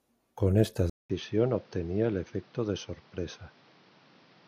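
Speech that, after a 200 ms silence at 0.90 s, turns duller, with nothing above 6.3 kHz, about 5 dB quieter, and with a new noise floor, likely an input switched to a poorer device rather than a simple filter.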